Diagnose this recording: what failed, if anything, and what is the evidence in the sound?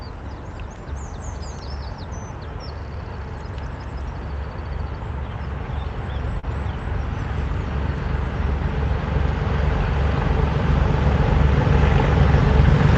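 A brief smear at 6.39 to 6.45 s, where the sound seems to stretch its last instant and then rejoin itself, is short concealed packet loss at the network stage. About 40 ms of audio arrived too late for playback or not at all. The receiving Opus decoder bridged 34 ms of that gap by extending the preceding signal, then blended back into the real audio. The call path's 8 kHz upper limit is heard throughout.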